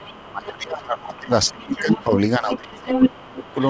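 From 0 to 0.19 s a faint second voice sits about 25 dB under the speech. This is the other side's voice leaking through, likely loudspeaker sound the echo canceller failed to remove. It returns from 1.15 to 2.08 s at about 20 dB down. From 2.51 s to the end at 3.7 s it rises to roughly 5 dB above the talker. Unlike the talker's own speech, it sounds like a separate, competing voice rather than a change in the main voice.

Overlapping this, from 0.18 to 3.57 s, the speech is suppressed in double talk. For around three seconds in total the talker's level drops, at worst by about 20 dB. The likely cause is the canceller, unable to tell near speech from echo, turning everything down. It is heard as loss, not as an added voice, and it is separate from the G.722 band limit, which leaves nothing above 8 kHz throughout.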